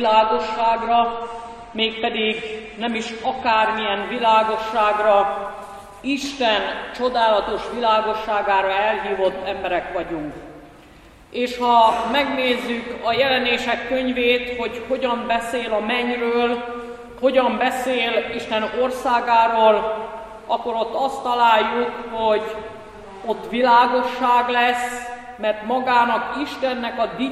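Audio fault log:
0.0–4.0 s, adaptive stream starting at a low bitrate: The opening sounds dull. Nothing is heard above 9 kHz, and coding artefacts are stronger. The player began on a cheap version of the stream so playback could start at once. Its character fits AAC-LC at around 32 kbit/s. At 4.0 s the top end returns abruptly, with no break in the sound. That matches a switch to a higher tier, near 96 kbit/s.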